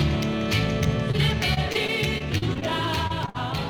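From 1.11 to 2.63 s there is repeated packet loss with a robotic sound. About ten short holes, none longer than roughly 36 ms, are each patched by stretching the preceding sound. Around an eighth of that stretch is synthetic fill, giving a choppy texture with pieces missing. What sets it apart from a single dropout is the steady recurrence of the holes across the whole stretch.

At 3.07 to 3.12 s and again at 3.26 to 3.29 s, short concealed packet loss produces brief smears of roughly 16 to 25 ms. Each hole is bridged from the previous sound and then blended back. These are isolated wobbles rather than a rhythmic chain of gaps.

Directly after the second one, from 3.29 to 3.36 s, a burst of packet loss removes a longer piece. About 50 ms of continuation fades toward a held buzz or hiss before the audio picks up further along. The fading tail and the jump in the audio distinguish it from the quick blended-in smears just before.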